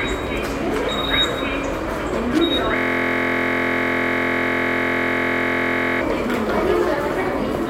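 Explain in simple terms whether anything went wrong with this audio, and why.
Two things went wrong. At 2.32 to 2.39 s there is a short burst of loose connector crackle. A worn or dirty contact kept connecting and disconnecting. That chopped the signal into a brief, rough scratching sound.

From 2.76 to 6.01 s there is a system hang loop. The computer froze, but the sound hardware kept replaying its last small chunk of audio. That chunk is 23.22 ms long, which fits a 1024-sample buffer. It repeats about 140 times, producing a steady buzz at 43.1 Hz.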